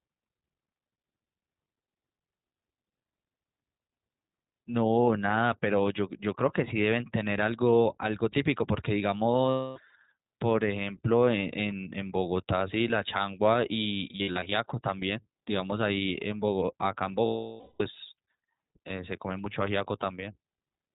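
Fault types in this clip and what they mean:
iLBC codec: The whole clip runs through iLBC, a narrowband VoIP codec, so nothing above 4 kHz survives and the speech sounds boxed-in. The damage is plainly audible, with a clear but rough, slightly synthetic edge on every syllable. iLBC codes each frame's excitation on its own without leaning on the previous one, and the graininess here fits its 20 ms frame mode at around 15 kbps.
lost iLBC frames: There are three dropouts. At 9.50 to 9.79 s about 260 ms goes missing, and at 17.26 to 17.82 s a longer 540 ms stretch drops out. At 14.12 to 14.53 s about 220 ms is lost in short bursts spread across 400 ms, the longest roughly 70 ms. The decoder fills each gap by repeating the last pitch cycle mixed with noise, so you hear a held, buzzy vowel that fades through the long one. Speech snaps back almost immediately afterward.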